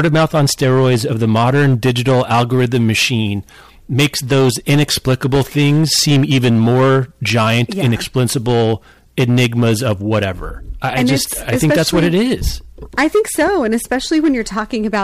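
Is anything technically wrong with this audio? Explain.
Yes. The speech is hard clipped throughout the whole clip. The signal is driven roughly 12 dB past what a stage in the chain can pass, so around a tenth of the samples hit the ceiling and have their peaks sliced flat. Those squared-off tops generate strong high-order harmonics well above the original content. With overload this heavy, every loud syllable carries a harsh, buzzy fuzz, not just occasional crackle on the highest peaks.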